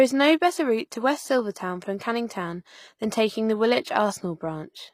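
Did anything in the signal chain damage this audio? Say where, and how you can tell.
Yes, the damage sits at the codec stage and runs through the whole speech clip. The top end sounds bright but synthetic, with gritty, lispy s sounds, which points to likely HE-AAC compression: treble copied up from lower bands rather than coded, fitting a bitrate around 24 kbps.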